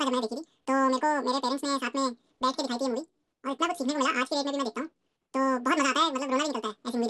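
Audio read two samples at a time (double speed), taking each sample pair as one frame, makes this speech run the entire clip twice as fast, a full octave (12 semitones) high.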